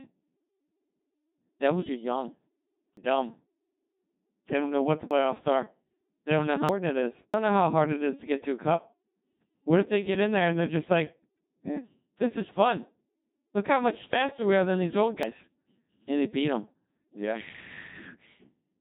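The whole clip has passed through the Codec 2 vocoder. The speech sounds robotic and buzzy. Its character fits a rate near 2.4 kbit/s, and the damage is heavy. Only pitch, voicing, energy and a rough spectral envelope survive. The decoder rebuilds the voice from sine waves, so the original waveform is gone.

Five jumps follow, each with the sound skipping ahead and no silence. At 2.97 s about a fifth of a second is missing. At 5.11 s roughly a tenth of a second goes. At 6.69 s and 7.34 s close to a third of a second vanishes each time. At 15.23 s about a tenth of a second is lost. These are likely dropped buffers from an overrun. The samples were overwritten before being collected, and the edges were joined directly.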